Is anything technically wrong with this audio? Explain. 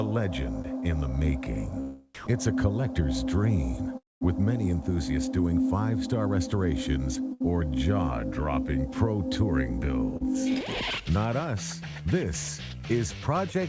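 Yes, there are several packet-delivery faults, heard against a band-limited call path that cuts off at 8 kHz, consistent with G.722 at 64 kbps.

Short concealed packet loss occurs at 0.62–0.66 s, 0.80–0.84 s and 10.17–10.28 s. About 20 ms, 20 ms and 40 ms of audio never arrived. The decoder extrapolated the preceding sound and crossfaded back, so each gap comes across as a brief smear or wobble rather than a hole. The last one runs slightly long.

At 2.15–2.27 s about 100 ms of sound is replaced by 120 ms of steady comfort noise. This is likely sound dropped by the voice detector: the sender classified the material as background and stopped transmitting until the detector triggered again.

A long network dropout runs from 3.97 to 4.23 s, likely caused by the link delivering nothing for about 240 ms. Concealment continues the last sound briefly, then decays, leaving roughly 210 ms of silence before the audio resumes with that segment missing.

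A burst of packet loss at 7.33–7.43 s removes about 80 ms. The receiver fills the gap with a 72 ms continuation of the previous sound that fades as it goes. It is heard as a held buzz or hiss, with the timeline stretched by about 8 ms.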